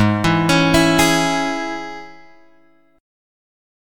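Nothing goes wrong anywhere in this one; there's no glitch, dropout or distortion to point to at any moment.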